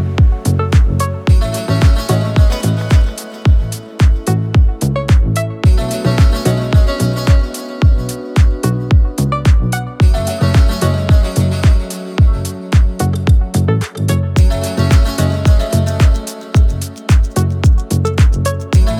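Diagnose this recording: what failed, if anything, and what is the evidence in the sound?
Nothing in this recording points to a failure. No stage of the chain, from capture through to playback, leaves any audible evidence of having gone wrong.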